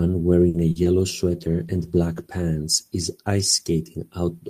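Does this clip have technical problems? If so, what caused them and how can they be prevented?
Yes. There are three kinds of fault.

First, a short stall from a late packet, from 0.49 to 0.70 s. A packet arrived about 50 ms late and the jitter buffer ran dry. The receiver held the last sound for 50 ms, then resumed where it left off. Nothing is lost. The sound simply lingers too long, with a faint buzz or dip. A larger or adaptive jitter buffer that grows before underrunning would prevent it.

Second, short concealed packet loss, twice: 0.72 to 0.78 s, where 40 ms never arrived, and 0.84 to 0.88 s, where 20 ms was lost. Each time the decoder extended the preceding sound to cover the gap, then blended back into real audio. The result is a brief smear or wobble, and a short consonant may drop out. Forward error correction or redundant packets would let the receiver rebuild these gaps instead of guessing.

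Third, a call bitrate drop, from 1.28 to 4.02 s. The bandwidth estimate fell, and the encoder went from 32 kbps to 17 kbps. It stayed at its lowest rate for 1.17 s. Coarser coding makes the speech rougher and more muffled, with less high-frequency detail, until the rate climbs back. A more stable network path, or congestion control that backs off less sharply, would prevent it.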